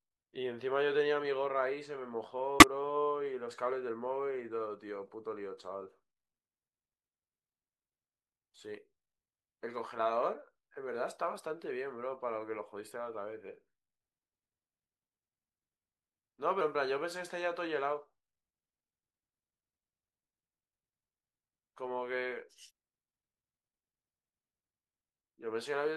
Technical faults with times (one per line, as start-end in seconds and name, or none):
2.58-2.63 damaged data in a compressed stream
10.38-10.41 damaged data in a compressed stream